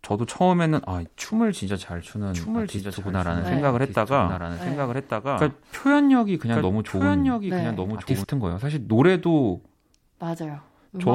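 From 2.34 s to 8.24 s a doubled audio track runs under the speech: a second full-band copy trails about a second behind, a few decibels quieter, likely from a slower capture path. Unlike an echo, it has no decay or room colour and cuts in and out abruptly.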